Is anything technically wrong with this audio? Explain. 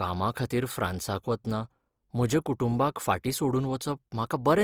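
Yes. Opus compression damage is plainly audible from start to finish. The likely cause is Opus running in its CELT music mode, with bandwidth still fullband but too few bits per band, which fits a rate around 24 kbps. The encoder preserves each band's energy but fills under-coded detail by folding lower bands or injecting noise, so the speech picks up a rough, grainy, noisy texture rather than the swirling holes of MP3.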